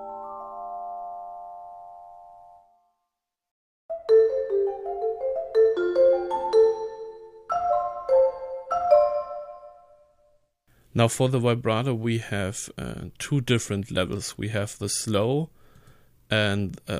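No technical faults are audible.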